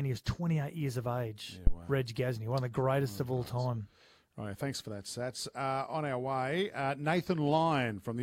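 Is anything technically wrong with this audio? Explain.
Yes. From 1.67 to 1.76 s a deep, low thump cuts into the speech, peaking at about -12 dBFS and decaying over about 21 ms. It is a phantom power thump: a supply switched on or off on a live input sends its voltage step through the coupling capacitors.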